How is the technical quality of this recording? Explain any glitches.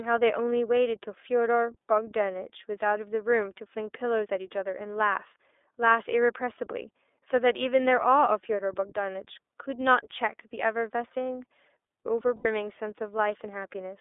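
The technical quality is limited: the whole recording passed through a low-bitrate voice codec, and one short dropout occurs near the end.

The speech was carried by the iLBC codec throughout, a narrowband VoIP coder that encodes each frame's excitation independently. The band here runs from about 300 Hz to 3.6 kHz, and the coarseness is consistent with 30 ms frames at roughly 13 kbps. The result sounds thin and muffled, with no top end. The coding damage is plainly audible as a rough, slightly synthetic texture on the voice.

From 12.35 to 12.46 s there are lost iLBC frames. A stretch of about 90 ms went missing, which fits three consecutive 30 ms packets failing to arrive. The decoder filled the hole by repeating the last pitch cycle blended with noise, so the gap sounds like a briefly held, buzzy, breathy vowel. Because each iLBC frame decodes independently, the voice recovers cleanly right after 12.46 s.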